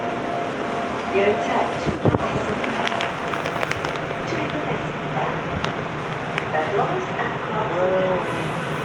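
Everyday sounds, with nothing technically wrong to hear.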